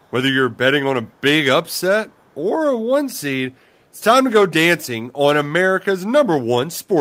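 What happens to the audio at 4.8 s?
Nothing goes wrong at 4.8 s; the speech carries on intact through that moment, with no dropout, click, glitch or change in level or tone.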